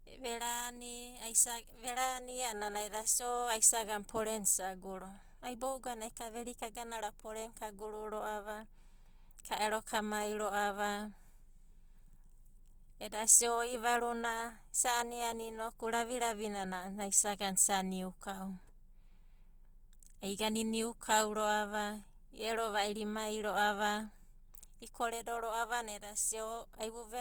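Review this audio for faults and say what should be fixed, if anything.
Opus compression throughout: the speech sounds grainy and rough because fine detail is filled with noise while full bandwidth reaches 20.2 kHz, likely from a CELT encode around 24 kbps. Encode at a higher bitrate, or keep an uncompressed master for editing and distribution.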